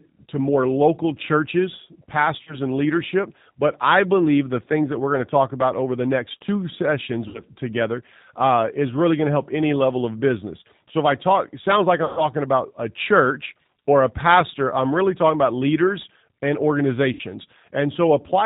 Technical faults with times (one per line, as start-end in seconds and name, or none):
0.00-18.45 G.729 codec
2.43-2.56 VoIP packet loss concealed by the speech codec
7.28-7.41 VoIP packet loss concealed by the speech codec
12.05-12.23 VoIP packet loss concealed by the speech codec
17.13-17.21 VoIP packet loss concealed by the speech codec